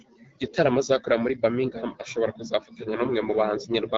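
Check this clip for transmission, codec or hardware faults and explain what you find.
No transmission, codec or hardware faults.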